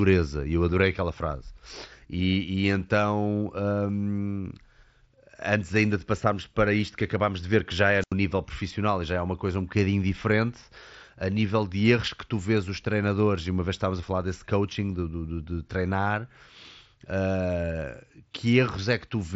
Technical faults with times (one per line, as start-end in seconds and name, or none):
8.00-8.13 wireless microphone squelch dropout
12.85 concealed Bluetooth headset packet loss
14.01 concealed Bluetooth headset packet loss